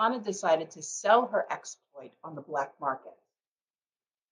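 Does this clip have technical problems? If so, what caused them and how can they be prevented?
No, there's nothing technically wrong to hear in this speech clip, so there's nothing that needs fixing or preventing.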